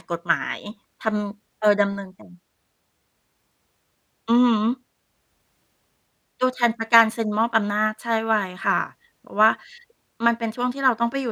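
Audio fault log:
No audible faults found.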